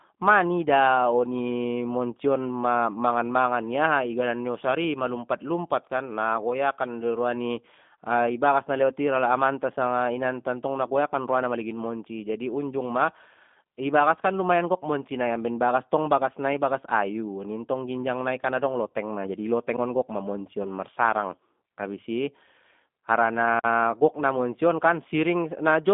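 Throughout, the speech sounds narrow, slightly rough and synthetic, confined to roughly 200 Hz to 3.6 kHz. That is the G.729 codec at 8 kbit/s, which rebuilds speech from a vocal tract filter, pitch predictor and sparse pulses, and its damage is plainly audible.

At 18.88 s, right after "ginjang nai kan adong", and again at 20.63 s, the sound briefly smears into a stretched, fading sound that lasts about 60 ms. That is VoIP packet loss concealed by the speech codec. Each time about 20 ms was lost, which fits one packet, and the decoder extrapolated from its last frame before recovering.

At 19.77 s there is a sharp tick, and from 23.60 to 23.64 s a short hole, just before "gok na monci on". These are blocks of digital silence, where samples were replaced by zeros. The gaps of about 11 ms and 43 ms fit unfilled 512-sample and 2048-sample buffers.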